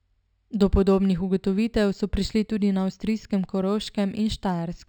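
Imaging from linear upsampling runs throughout the speech. Straight-line interpolation, which fits a 12 kHz source raised to 44.1 kHz, leaves a mirrored copy between 6 and 12 kHz about 30 dB down, a faint metallic shimmer on sibilants. Unlike aliasing, it mirrors the existing band rather than folding tones downward.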